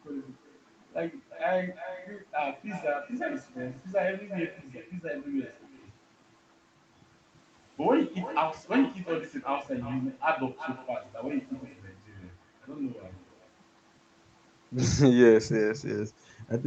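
Throughout, each phrase returns roughly 0.4 s later as a thinner copy about 13 dB down: echo with no canceller, from unremoved far-end loudspeaker pickup.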